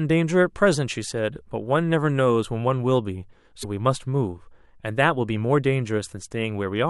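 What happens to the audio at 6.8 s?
Nothing goes wrong at 6.8 s; the audio there is intact, with no dropout, click or distortion.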